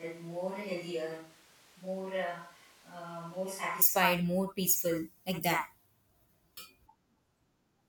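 From the first moment until 3.82 s, the speech is most likely coming from a distant microphone because the close microphone's feed was missing. The switch to a distant microphone is already under way when the clip begins. The voice sounds roomy and hollow, thinner in the bass, and about 10 dB quieter, with room noise only about 25 dB below the speech. At 3.82 s the sound abruptly tightens and steps up in level.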